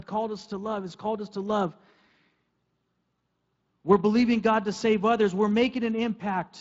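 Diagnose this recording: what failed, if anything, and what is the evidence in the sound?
Nothing stood out on listening to this recording that would point to a failure at any stage of the chain.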